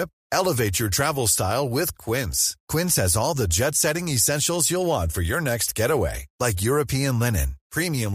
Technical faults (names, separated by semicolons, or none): none